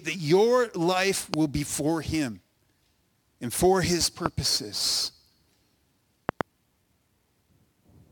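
Speech carries three loud pops at 1.34–1.36 s, 4.26–4.28 s, and a double pop at 6.29–6.43 s, each around 20 dB above the speech, which continues beneath. They are likely voltage spikes from a plug, switch or static, and appear as tall spikes and full-height vertical stripes.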